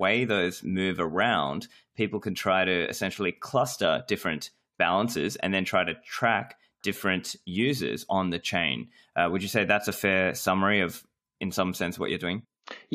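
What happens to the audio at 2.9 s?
Nothing goes wrong at 2.9 s; the speech there plays through intact, with no dropout, click or distortion.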